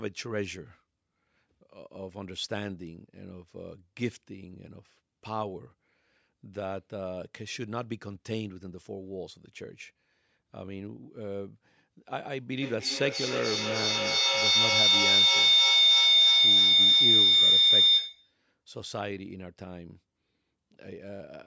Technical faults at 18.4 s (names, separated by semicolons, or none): feedback howl